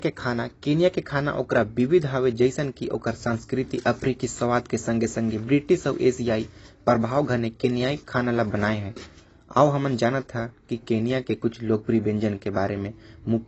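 Dull, band-limited speech with nothing above about 7.9 kHz, and a plainly audible warbling, fizzy smear on sustained sounds and sibilants that persists from start to end. The likely cause is AAC compression: an AAC-LC encoder starved of bits discards the upper spectrum and quantises the remaining frequency lines so coarsely that gaps and substitute noise appear. The lowered cut-off and the degree of damage fit a low bitrate of around 24 kbps.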